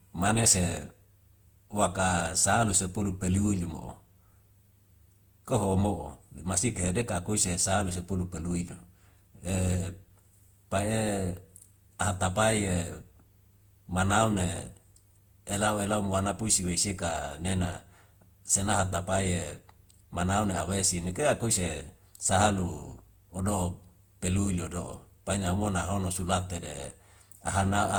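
Throughout the speech, the sound is swirly, smeared and hollow, and consonant attacks blur. This is generation loss, likely from about seven rounds of Opus encoding, which fits a 64 kbit/s chain. Each pass requantised on a shifted frame grid, so the noise stacked up.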